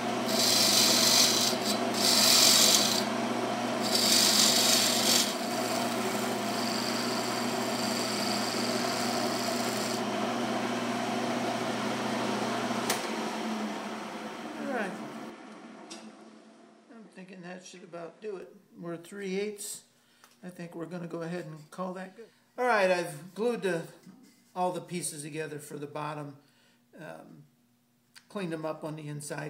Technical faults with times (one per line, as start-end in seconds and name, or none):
15.30-18.42 input switched to a poorer device